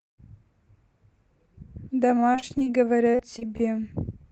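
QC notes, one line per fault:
2.07–2.68 s and 3.11–3.62 s, repeated packet loss (robotic sound): the first stretch has eight gaps and the second five, with roughly 100 ms and 80 ms of audio missing and the longest holes at 23 ms and 34 ms. The receiver filled each hole by extending the preceding sound, so about a quarter of each span is synthetic. The rapid alternation of real and patched audio is what makes it choppy and machine-like.
2.24–2.85 s, jitter buffer slow-down: overlapping the first loss run, the receiver stretched the audio by 37 ms to rebuild its reserve, playing at 95% speed. It did this by repeating short pitch periods rather than resampling, so the pitch holds while the sound is slightly drawn out. Combined with the concealment around it, this can add a faint warble to an already unsteady passage.
4.22–4.25 s, short concealed packet loss: about 20 ms failed to arrive in time, and the decoder covered it with 17 ms of continuation from the preceding sound before blending back into the received signal. 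The result is a brief smear or wobble near the end of the clip. The call codec limits the band to around 8 kHz throughout.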